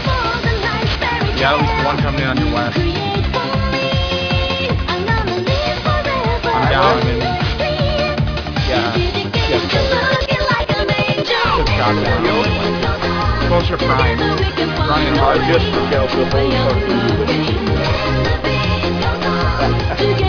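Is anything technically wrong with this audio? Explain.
Yes. Aliasing is present from start to finish. The sound appears to have been downsampled from 48 kHz to about 11 kHz without an adequate anti-aliasing filter, so content above the new Nyquist limit of 5.5 kHz was not removed. Instead, it folds back below 5.5 kHz as spurious, inharmonic components that are fairly strong, roughly 15 dB under the wanted signal. The result is a gritty, metallic edge on bright or hissy sounds, with the spectrum packed right up to 5.5 kHz.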